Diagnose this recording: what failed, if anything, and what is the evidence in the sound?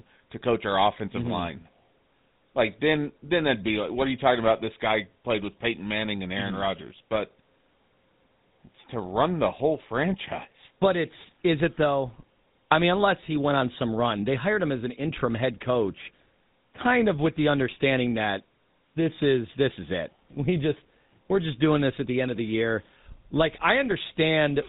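GSM full-rate codec damage runs through the whole speech clip, a codec-stage fault. Nothing survives above 4 kHz, and the voice carries a buzzy, gravelly roughness from a vocal-tract model driven by sparse, regularly spaced excitation pulses, which fits GSM full rate at 13 kbps.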